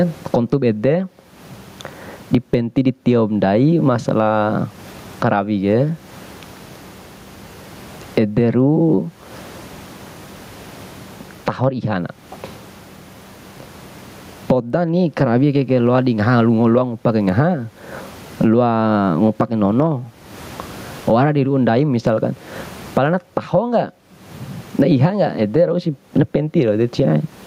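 Speech recording with gain pumping throughout: the input gain is likely set far too high, so a fast limiter clamps down on every loud syllable, swinging level by about 25 dB. The room noise sits about 45 dB below the speech, and the speech is left squashed and flat.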